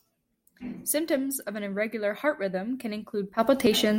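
No technical faults can be heard in the speech at any point.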